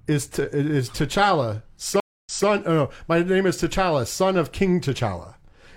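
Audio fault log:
2.0–2.48 s stream reconnect: Silence lasts 245 ms. Playback then resumes 232 ms earlier, repeating a moment of speech. The connection broke and a fresh decoder restarted mid-stream.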